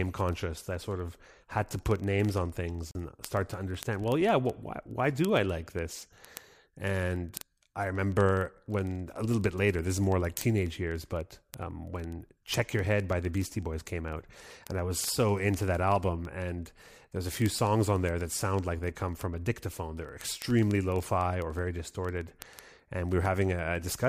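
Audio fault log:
0.12–24.09 s, word clock ticks: Sharp ticks recur at a steady rate of roughly one every 40 ms, about 25 per second, for the whole clip after the first tenth of a second, so there are several hundred of them. The receiving device's clock drifts against the sender's by something like 500 ppm. Each time the two clocks slip past each other, a few samples are misread and a single sample is dropped or repeated. That brief discontinuity is heard as a click of uneven strength. On a spectrogram it shows as evenly spaced thin vertical broadband lines. On the waveform it shows as small isolated spikes or steps.
2.91–2.95 s, Bluetooth stall: The sound drops to total silence for 39 ms and then resumes. This is likely a wireless dropout in which interference delayed packets, the headphones' buffer ran empty, and playback paused until the resent data arrived. The abrupt stop and restart make a short hole in the audio with hard edges. 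On a spectrogram it appears as a narrow blank vertical band across all frequencies. On the waveform it is a flat line bounded by sudden cuts.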